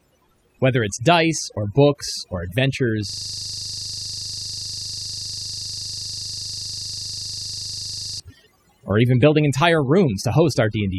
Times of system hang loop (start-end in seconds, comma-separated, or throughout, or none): 3.09-8.20